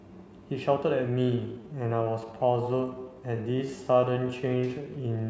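From 1.06 s to the end, the speech abruptly slows to about 0.68 times its pace while its pitch stays put, so it drags: a time-stretched section, likely from software repeating short pieces to lengthen it. Unlike slowed playback, the pitch doesn't drop.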